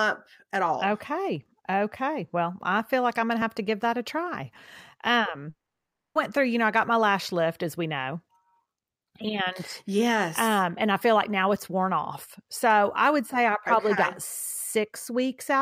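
At 5.49 s the speech cuts out until 6.17 s. The last sound smears into a short fading buzz, then about 600 ms of silence follows, and speech picks up again with 660 ms simply gone. That's likely a long network dropout.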